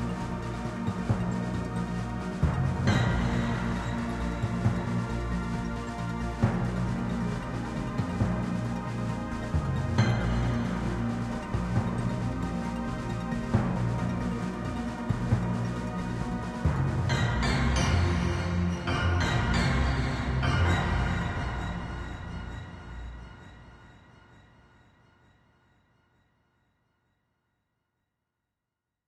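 Nothing technical stands out in this recording of sounds; there's nothing here to flag.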